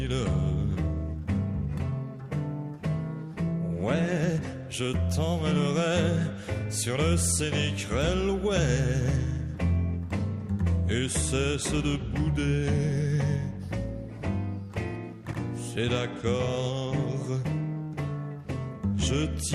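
Repeated frames at 15.31 to 15.39 s: an 80 ms stretch of compressed audio, which fits a run of about four frames, plays once more straight after itself, heard as a brief stutter where that fraction of a second recurs, lengthening the audio by 80 ms.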